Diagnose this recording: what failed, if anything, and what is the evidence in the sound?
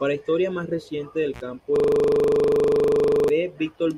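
Intermittent contact, 1.34 to 1.41 s, just after "historia más reciente del": a fault in the analogue wiring. The speech drops out for about 50 ms, with crackle at both edges of the gap and only faint hiss while the signal is absent. That pattern points to a loose plug or cable whose conductor briefly lost contact and then reconnected, rather than to anything digital. The crackle comes from the contact scraping open and shut.

System hang loop, 1.76 to 3.29 s: a failure at the driver or buffer stage. A single 40 ms fragment of audio repeats exactly, about 38 times, producing a hard 25 Hz stutter that sits close to a buzz. The computer or its audio driver stopped supplying new samples, while the sound hardware kept replaying the same ring buffer, whose length fits the 40 ms loop, until processing resumed.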